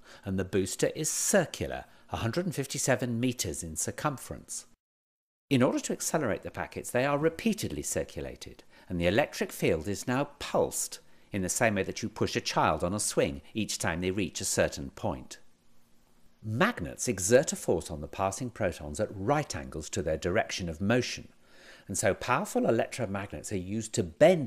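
No technical faults can be heard anywhere in this audio, and the signal carries through without any audible disruption.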